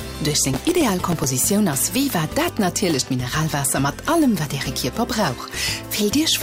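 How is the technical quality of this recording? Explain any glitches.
One glitch stands out. From 0.42 to 1.24 s there is processor overload crackle. Very short buffers, around a millisecond and a half, miss their deadlines again and again, each replaying stale audio with hard edges. It sounds like gritty tearing riding on the sound.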